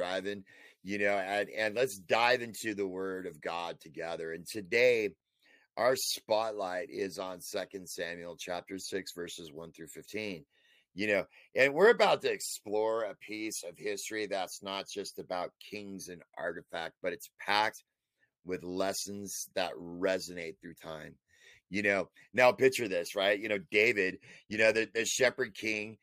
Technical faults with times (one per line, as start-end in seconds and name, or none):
none